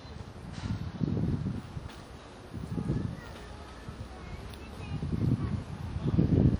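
A recording of everyday sounds, and the whole thing carries plainly audible transform-codec damage, most likely WMA compression, with the character pointing to an early WMA version at something around 48 kbps. The long transform blocks smear quantisation noise over tens of milliseconds, so sharp sounds ring and go washy, and a hiss rises and falls with the level. Content still extends to about 20.1 kHz, so the damage comes from the quantisation rather than a lowpass.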